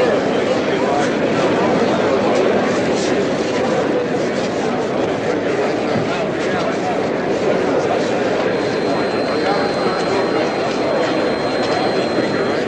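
From 8.39 s to the end of the clip at 12.67 s, a feedback whistle sits behind the sound as a thin, steady tone at 4.2 kHz, well below the main signal and swelling and fading slowly in level. It is likely caused by a loudspeaker-to-microphone loop held just at the edge of oscillation.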